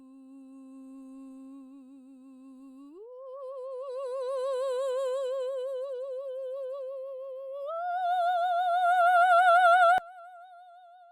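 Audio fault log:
9.98–11.12 s, one channel inverted: the music drops by about 24 dB, leaving only a faint residue. The likely cause is one channel flipped in polarity, so shared content cancels in mono. The waveform shrinks abruptly, and the spectrogram darkens across the band.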